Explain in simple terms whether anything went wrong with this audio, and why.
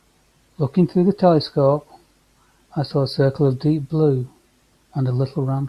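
Nothing went wrong here: the speech recording comes across as a steady, intact signal with no technical problems to point to at any moment.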